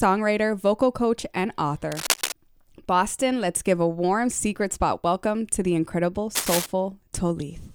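From 1.92 to 2.32 s, a burst of cable scratch noise sits over the sound: dense, uneven crackle and rustle, only a few decibels below the wanted signal. The same scratching returns from 6.35 to 6.66 s at a similar level. The likely cause is a worn cable, connector or control being moved, so its contact resistance fluctuates rapidly and injects irregular noise into the signal path for as long as the movement lasts.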